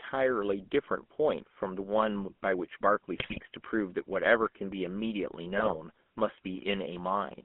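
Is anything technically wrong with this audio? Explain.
Yes. Throughout, the speech carries GSM full-rate codec coloring: a pulse-excited vocal-tract model fitting 13 kbps, band-limited to about 200 Hz to 3.4 kHz, giving plainly audible buzzy, gravelly roughness.

GSM bit errors occur at 3.18–3.41 s and 5.56–5.77 s. Corrupted filter, pitch and gain parameters distort decoded frames, producing squawks, pops and gargling bursts.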